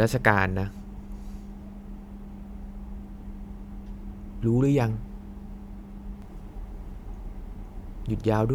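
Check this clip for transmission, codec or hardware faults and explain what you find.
One fault is present: a doubled audio track. From 6.22 s to the end of the clip, the speech is joined by a second, full-band copy of itself trailing roughly half a second behind and about 5 dB quieter. The likely cause is the same signal being captured again through a slower path, or an edit leaving two copies out of step. The copy has no reverb tail or room colouring and cuts in abruptly, so it sounds like a clean, overlapping repeat. On a spectrogram, the speech patterns from 6.22 s on appear twice, with the second set slightly fainter and shifted right by a fixed offset. The waveform shows overlapping envelopes.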